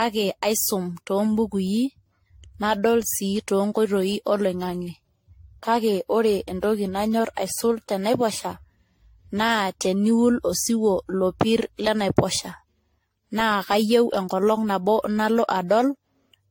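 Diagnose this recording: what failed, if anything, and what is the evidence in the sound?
The speech is damaged at the codec stage by generation loss, most likely from about five rounds of lossy re-encoding, with a chain consistent with AAC-LC at around 64 kbit/s. Throughout the clip the speech sounds swirly and hollow, and consonant attacks are smeared. Each decode and re-encode quantised the signal on a shifted frame grid, so the errors accumulated. A spectrogram would show a hard ceiling at 16.6 kHz, with stacked holes and fluttering patches below it, and the waveform's transients would look softened.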